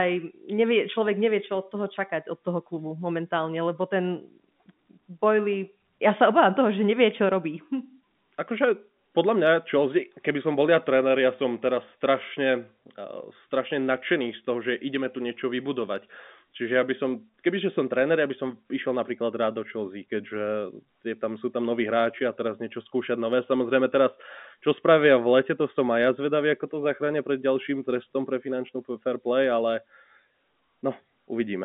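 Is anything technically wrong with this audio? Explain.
No, nothing is technically wrong.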